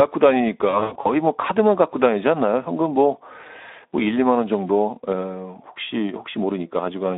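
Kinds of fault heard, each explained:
Speex codec: A low-rate CELP speech codec, here at a setting consistent with roughly 11 kbps, leaves too few bits for the excitation. The speech sounds plainly hoarse and grainy throughout, confined to a telephone-like band of about 250 Hz to 3.7 kHz.
VoIP packet loss concealed by the speech codec: From 0.69 to 1.12 s, lost packets add up to about 200 ms of gaps scattered over 360 ms, the longest 80 ms. The decoder repeats its last pitch and filter at falling gain, giving stretched, fading sound before recovery.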